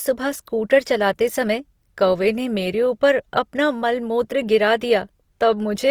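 Throughout the speech, the audio has a grainy, rough, noisy texture where fine spectral detail should be. Bandwidth remains full, with content reaching about 20.4 kHz. The cause is likely Opus compression in music mode, filling starved bands with noise or folded copies. This is consistent with about 24 kbps.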